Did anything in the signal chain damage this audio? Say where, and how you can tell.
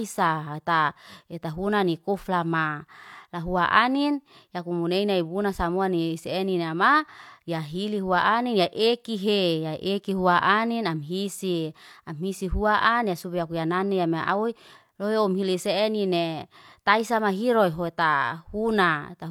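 No, nothing along the chain seems to have damaged this recording, so there's no stage to point a finger at here.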